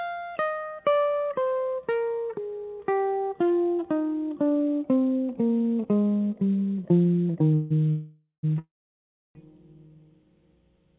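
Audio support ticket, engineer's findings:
Call audio freeze, 7.54–7.72 s: music stalls, last sound carried on as a fading buzz for 0.16 s. Call audio freeze, 7.90–8.45 s: 0.53 s fill, final 0.1 s silent. Call audio freeze, 8.59–9.37 s: 0.76 s, mostly silence (0.67 s). Likely late packets draining the jitter buffer. Playback resumes where it stopped, nothing lost, each delay adding to the last, over a G.711 A-law path band-limited below 4 kHz.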